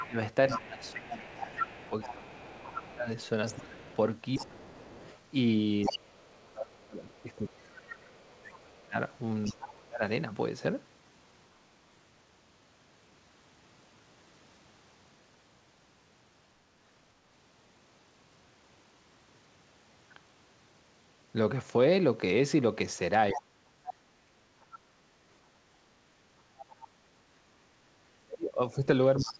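From 0.0 to 7.35 s the other side's voice leaks through, about 10 dB below the talker. It sounds like a second voice underneath. The likely cause is loudspeaker echo that the echo canceller did not fully remove. Overlapping that, from 0.06 to 10.02 s, the talker's speech is suppressed in double talk. For roughly seven seconds the voice dips and drops out in pieces, by up to about 25 dB. The canceller likely could not tell its own talker from the echo and turned both down.

More leakage follows from 9.44 to 9.84 s, at about 20 dB below the speech. At 23.33 to 23.91 s the speech is suppressed again for about half a second, dropping by up to about 35 dB. Leakage overlaps it from 23.34 to 24.79 s at about 15 dB down. A short scrap of the other voice returns from 26.57 to 26.87 s, about 20 dB down. From 27.37 s to the end the speech is suppressed once more, by up to about 35 dB. A last fragment of leaked voice sits at 29.17 to 29.33 s, about 15 dB down. 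Throughout, nothing is heard above 8 kHz, which fits a G.722 call path.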